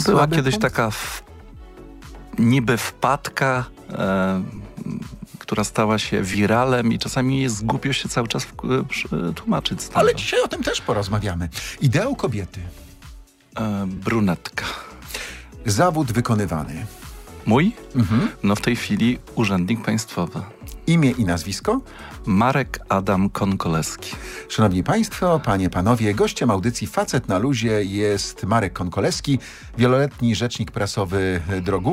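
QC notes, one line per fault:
4.56–4.58 s, 6.33–6.35 s, 13.97–13.99 s: lost LE Audio frames. About 15 ms drops out each time, which fits two 7.5 ms frames. The LC3 decoder refills each gap by repeating the last spectrum with randomised signs, leaving a brief noisy smear over any tonal content.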